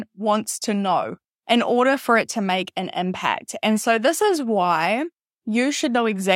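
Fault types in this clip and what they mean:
Drift correction step: 5.04–5.56 s, after "so this is why", speech runs 5.55% fast and nearly a semitone sharp, then snaps back, likely from a clock-sync rate adjustment.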